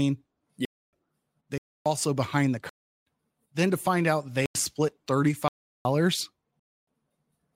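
At 0.65, 1.58, 2.69, 4.46, 5.48 and 6.60 s the speech drops into blocks of digital silence of 0.28, 0.28, 0.37, 0.09, 0.37 and 0.28 s. Zeros likely replaced unfilled output buffers, the longest fitting 16384-sample blocks. Each is heard as a short hole in the speech.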